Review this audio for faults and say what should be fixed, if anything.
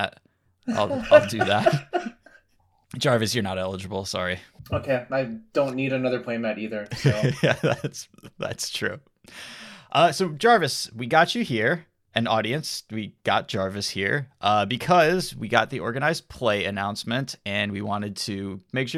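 No faults found; nothing to fix.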